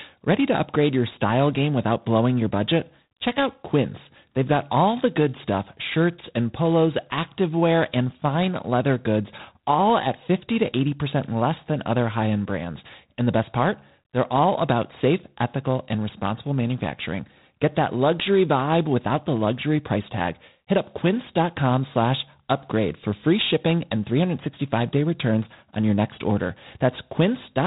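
G.726 ADPCM coding runs throughout. Each sample is coded as a few bits of difference from a prediction, and the rasping, level-following hiss points to 24 kbit/s. Nothing above 3.8 kHz passes. An integer overflow at 9.90 s, just after "and fine leather goods", wraps a peak to the opposite sign, producing one violent crack far sharper than clipping.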